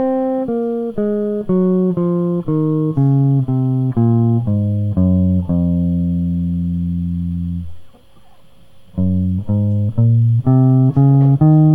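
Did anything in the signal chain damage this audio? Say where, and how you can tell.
No, nothing in the chain damaged this music.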